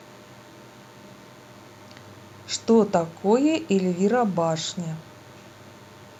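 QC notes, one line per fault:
throughout: DECT cordless phone buzz, a thin, harmonic-rich 100 Hz buzz about 35 dB below speech from rectified 10 ms radio bursts, unlike smoother mains hum.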